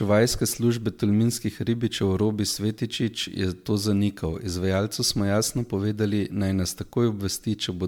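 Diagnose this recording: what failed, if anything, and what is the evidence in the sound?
Throughout the speech there is a swirling, hollow quality, with consonant attacks smeared and a watery haze that seems worse than a single decent MP3 would leave. Nothing reaches above about 19.9 kHz. This is generation loss at the codec stage, likely from the audio being decoded and re-encoded as MP3 roughly ten times at around 135 kbit/s. Each pass re-quantises on a shifted frame grid, so the noise and spectral holes stack up.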